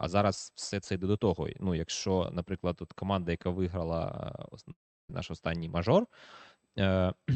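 After "команда яка виграла е", from 4.71 to 5.11 s, the sound decays into a fading buzz, then silence, returning at "наш останній мажор". This is likely a long network dropout.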